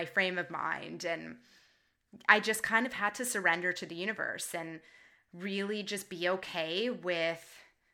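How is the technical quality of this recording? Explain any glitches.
No technical glitches can be heard anywhere in this recording.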